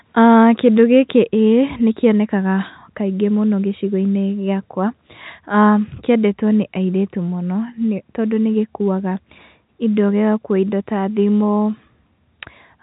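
No technical faults can be heard anywhere in this speech. The audio comes over a working WebRTC call path, and the coding noise with nothing above 4 kHz fits a G.711 mu-law codec running at 64 kbps.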